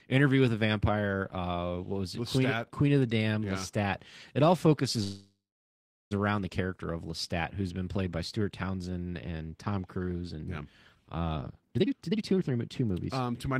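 A speech recording with two timing faults. From 5.03 to 6.13 s, just after "all focuses", a call audio freeze stretches the last sound into a fading buzz or hiss that drops to silence for about 0.76 s before resuming with "around the character of". This is likely packets stalling and the jitter buffer running dry. Nothing is lost, but 1.08 s of delay is inserted. From 11.36 to 13.57 s, a jitter buffer speed-up plays the audio at 142% speed at unchanged pitch, trimming roughly a second by repeatedly cutting pitch-period slices to shrink excess buffered delay, so the speech sounds hurried.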